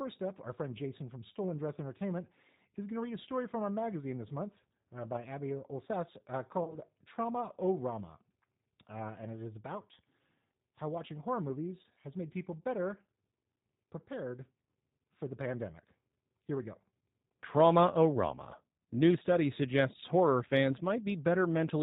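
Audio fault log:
Throughout: G.729 codec, plainly audible. The speech is rebuilt from a filter and a few pulses, fitting roughly 8 kbit/s, so it sounds rough, synthetic and dull above 4 kHz.
6.64 to 6.77 s: VoIP packet loss concealed by the speech codec. About 30 ms went missing, which suggests a single lost packet. The decoder stretched the last sound out and let it fade, and the voice stayed weak briefly afterwards.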